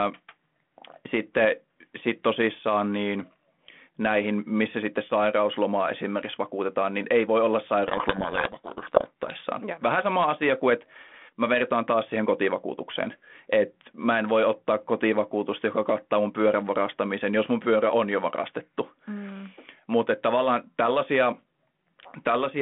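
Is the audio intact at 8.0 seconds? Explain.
No, the G.726 code words arrive with their bit order swapped, a codec payload misread lasting 7.88 to 9.38 s, just after "niin ei voi olla", burying the speech in harsh distortion.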